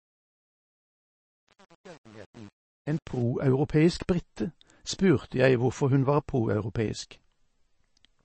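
From 0.00 to 3.22 s the speech sits under a fade, and that fade carries truncation distortion. The gain stage kept too few bits, about 7, and added no dither, so the quiet stretch is built from a handful of coarse amplitude steps. It sounds gritty. On a waveform the low-level stretch looks staircased. A spectrogram shows broadband grit tied to the signal rather than a clean noise floor.

Throughout the clip the sound is watery and swirly, with smeared consonant onsets and chirpy sibilants, and this is likely MP3 compression at a low rate, which fits roughly 26 kbps. Short of bits, the encoder cut the treble flat and dropped weak frequency lines that flicker on and off between frames. On a spectrogram nothing appears above 8.3 kHz, with a hard ceiling there. Below it, isolated blocks blink in and out.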